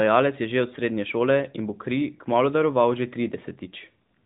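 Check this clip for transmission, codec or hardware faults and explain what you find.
No transmission, codec or hardware faults turn up here.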